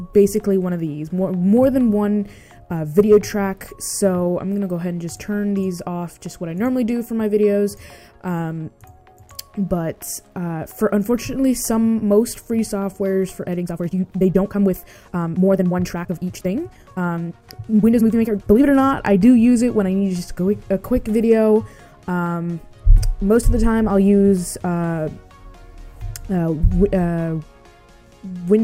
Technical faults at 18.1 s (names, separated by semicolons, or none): Wi-Fi interference; time-stretched section